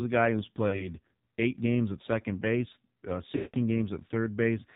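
A speech recording that has passed through the AMR narrowband mobile codec at heavy damage. Nothing survives above 4 kHz, and the voice has the buzzy, synthetic edge of a vocal-tract model rebuilt from very few pulses, which fits a low AMR-NB mode around 5.9 kbps. Simple band-limiting would only dull the top end. Here the timbre itself is coarse and artificial throughout. Lost AMR speech frames occur twice. From 0.68 to 0.88 s there is a brief warble and dip, consistent with about 40 ms of missing audio, or two 20 ms frames. From 3.36 to 3.57 s a longer run of about 180 ms, which points to nine frames, draws the last sound out and fades it toward silence before the voice returns rough and weak. A plain dropout would cut to silence at once, and a repeated buffer would stutter. The smeared continuation of the previous sound, followed by a fade, is what marks both events as the decoder concealing lost frames.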